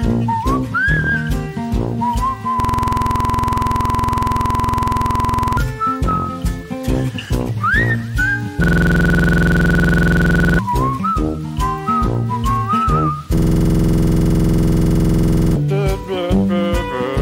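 A system hang loop occurs at 2.60–5.57 s, 8.64–10.59 s and 13.38–15.56 s. The system froze while the hardware kept replaying one 46 ms buffer, which fits a 2048-sample buffer. The result is a rapid stutter at 21.5 Hz, and roughly two to three seconds of audio are lost each time.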